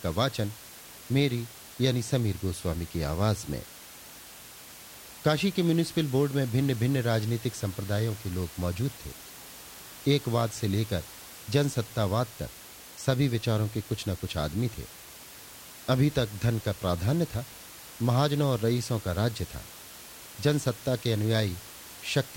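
There are no technical faults to describe in time order, since the speech carries only a room noise about 19 dB below it, which belongs to the recording itself.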